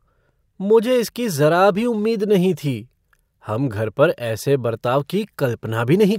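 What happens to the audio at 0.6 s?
Nothing goes wrong at 0.6 s; the speech there plays through cleanly, with no dropout, click, glitch or other fault at that moment.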